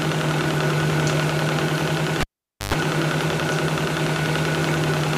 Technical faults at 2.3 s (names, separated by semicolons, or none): cable pulled and plugged in